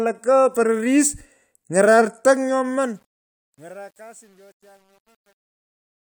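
Speech fading out from around 2.5 s to the end at 6.21 s carries truncation distortion on a fade from 2.48 s onward. The gain stage applying the fade is keeping too few bits and adds no dither; the coarseness points to something like 9-bit resolution. As the level drops toward the smallest step, the waveform collapses into a few square steps, so from 3.26 s to the end the tail turns gritty.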